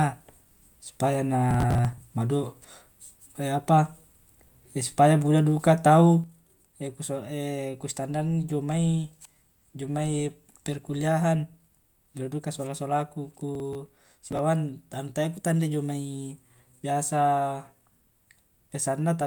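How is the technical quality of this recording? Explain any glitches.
The recording has two kinds of glitch: two bursts of crackle and a lasting drop in level.

Processor overload crackle occurs from 1.51 to 2.02 s and again from 13.55 to 14.39 s. The processor falls behind and misses a run of small buffers, each only a few milliseconds long, around twenty of them per burst. Each missed buffer is skipped, leaving a short hole with hard edges, so the speech sounds gritty and torn. On a waveform these show as tiny gaps and abrupt steps. A spectrogram shows a cluster of thin vertical broadband lines.

A sudden drop of about 6 dB begins at 6.24 s and lasts until the end. The likely cause is one channel dropping out: one stereo channel is lost, so material shared by both channels halves in amplitude when summed to mono. On a waveform the envelope narrows at once and stays smaller. A spectrogram shows the whole band dimming together at that moment.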